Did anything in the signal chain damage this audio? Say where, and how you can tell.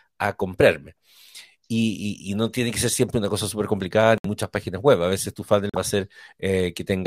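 Yes. At the codec stage, corrupt frames were muted twice: about 0.08 s of abrupt silence at 4.18 s, after "una cosa súper complicada", and about 0.07 s at 5.70 s, after "veces tu". The decoder rejected damaged compressed frames and the player substituted silence. Timing stays intact, unlike a dropout that shifts the audio.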